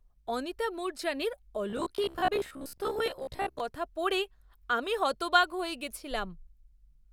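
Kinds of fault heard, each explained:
Robotic sound from repeated short buffers: from 1.70 to 3.60 s, between "অনিতা মুরজানির" and "কথা পড়ে আমি হতবাক", the speech turns into a stiff metallic buzz at a fixed 66.8 Hz that only loosely tracks the words. That pitch matches a segment of about 15 ms being looped, with roughly half the stretch replaced by repeats. The likely cause is audio arriving too slowly, so playback re-sends the last buffer and the missing audio is lost.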